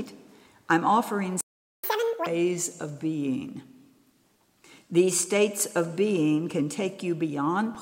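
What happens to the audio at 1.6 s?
A playback stall runs from 1.41 to 1.84 s: the sound cuts to silence for about 0.43 s, likely because the player's buffer ran dry.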